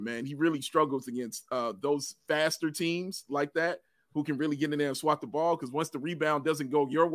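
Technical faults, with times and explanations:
No technical faults can be heard in this speech recording. Nothing in the audio calls for a time or an explanation.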